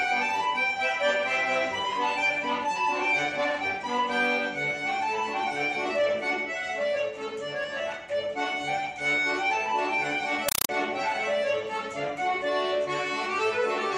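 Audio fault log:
10.49–10.69 s, compressed stream played as audio: the sound gives way to harsh, very loud chattering static for about 0.2 s. A Dolby Digital (AC-3) bitstream has reached the output as if it were ordinary samples, with nothing decoding it. Each coded frame arrives as a dense burst of noise about 5.33 ms long followed by zero padding. The bursts repeat at 31.25 per second, producing the rattling texture, and that burst length fits a 256 kbps AC-3 stream.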